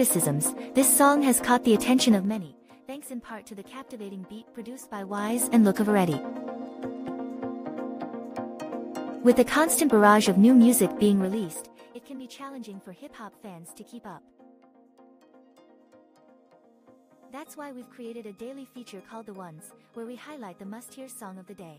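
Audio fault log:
2.1–2.49 s and 4.9–5.45 s, zipper noise: level drops about 20 dB, then climbs back, in unsmoothed 2 dB steps that each click, giving a quick ticking.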